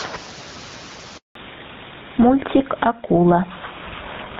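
Speech runs throughout with a squashed quality and a gain swing of around 10 dB, with the faint room noise sitting about 34 dB below the voice. This is gain pumping, likely from input gain set far too high with a fast limiter or compressor clamping down on every peak. At 1.17 s the voice fades out within a few tens of milliseconds and stays silent for 180 ms until 1.35 s. That dropout is a handover gap: while the call switched networks, no speech frames arrived, so that stretch is simply lost. From 1.35 s to the end the sound turns duller and rougher, with nothing left above 4 kHz. This is a fallback to narrowband, consistent with the call dropping from the HD Voice AMR-WB codec to an older codec such as GSM full rate.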